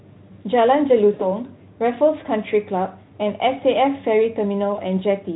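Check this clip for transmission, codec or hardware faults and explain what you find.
Two short dropouts occur, both VoIP packet loss concealed by the speech codec. The first runs from 1.13 to 1.30 s, with about 60 ms of audio missing. That fits three lost 20 ms frames. The second runs from 4.73 to 4.80 s, with about 40 ms missing. The decoder fills each gap by repeating its last pitch and vocal-tract shape at falling gain. The speech smears into a brief buzzy tone or coloured noise that fades. It sounds weak for a moment after the signal resumes. The Speex coding around these gaps adds no clear damage of its own.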